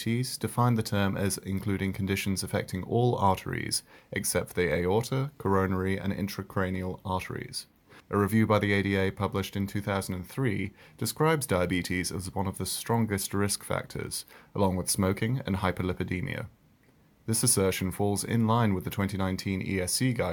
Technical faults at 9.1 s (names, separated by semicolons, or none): none